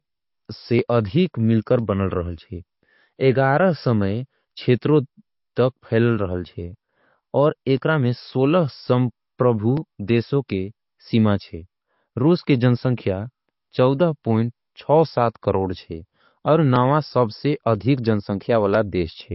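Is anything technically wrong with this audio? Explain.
Yes. Throughout the speech, the audio has plainly audible codec damage and nothing above 5.6 kHz. That is likely MP3 compression at a low bitrate, around 32 kbps. The encoder drops weak frequency lines and cuts the treble, which gives a watery, swirly quality. Unlike a simple low-pass filter, the loss changes from frame to frame.

From 0.79 s to 18.75 s there are periodic USB or driver dropouts, about twenty in all, spaced 1.0 s apart. Each time, roughly a millisecond of audio is skipped because the bus or driver stalls. The result is a regular tick. Its clockwork spacing is what separates it from random clicks.

At 10.48 s there is pre-echo. The codec spreads quantisation noise across its block, so a short hiss about 10 ms long comes just before an attack and softens it. Unlike the dropout ticks, this is smeared noise that leads into the sound rather than a sharp break.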